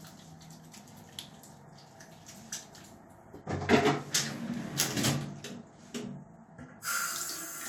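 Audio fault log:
No faults detected in this recording of sounds.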